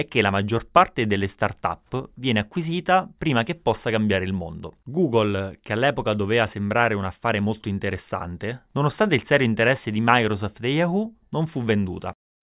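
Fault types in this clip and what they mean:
Nothing to list here, since no technical faults turn up anywhere in this speech recording.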